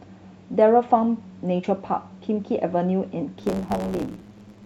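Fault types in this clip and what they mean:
Block size mismatch (truncated): one stage in the chain writes blocks longer than the next stage reads, so the tail of every block is discarded. From 3.38 s to the end of the clip the speech carries a buzz at about 109 Hz, the rate at which blocks are cut, and it runs roughly 1.09 times fast, the ratio of the two block sizes, while the timbre stays because each retained block plays at its original rate.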